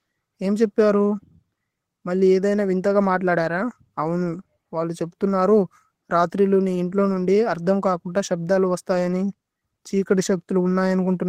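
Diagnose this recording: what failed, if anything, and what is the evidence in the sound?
Clock drift between sender and receiver runs through the whole speech clip, a network and jitter-buffer fault. The sender's clock runs about 3% slow, so packets arrive more slowly than the receiver plays them and its buffer keeps draining, forcing constant compensation.

Repeated timing corrections run from 0.29 s to 11.25 s as small, unevenly spaced edits and a slightly dragging tempo, at 97% speed. The receiver keeps repeating short pieces to refill its buffer, all in the same direction, stretching the audio by roughly a third of a second overall.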